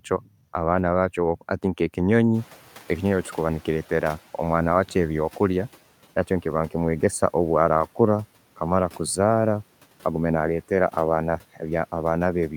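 From 0.1 to 0.29 s the opening speech sounds swallowed, dipping by about 11 dB over roughly a tenth of a second. This is speech cut by the noise suppressor, which mistook it for background noise. From 2.34 to 5.72 s, as room noise jumps by about 16 dB around 2.5 s, the noise comes through with less reduction at first, then sinks by about 9 dB. This is the noise suppressor catching up, its estimate taking 3.38 s to adapt.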